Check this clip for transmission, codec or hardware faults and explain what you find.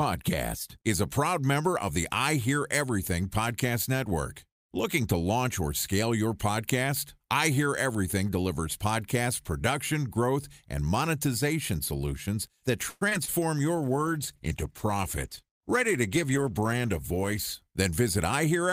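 Three transmission faults are audible, all clustered in the second half of the speech, starting just after "and monetization solutions that".

Call audio freeze, 12.89 to 13.03 s: the jitter buffer has likely run dry because packets stalled in transit, so the receiver stretches the last sound into a short fading buzz or hiss for about 118 ms. Nothing is lost. The speech simply resumes where it stopped, now running about 118 ms later than before, which comes across as a brief hitch or stutter in the flow.

Short concealed packet loss, 13.09 to 13.13 s and 13.25 to 13.30 s: in each case roughly 20 ms of audio failed to reach the decoder in time. The receiver fills each hole by extending the preceding sound, either from its pitch or as shaped noise, and then cross-fades back into the real signal. Each event is a quick smear or wobble, and a short consonant can disappear inside it.

Call bitrate drop, 13.77 to 17.63 s: the bandwidth estimate collapsed, so the Opus encoder was cut from 64 to 16 kbps and held there for about 3.8 s. 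At that rate it quantises much more coarsely and trims the upper frequencies, so the speech turns rough, watery or muffled. Clarity returns once the bitrate recovers near the end of the clip.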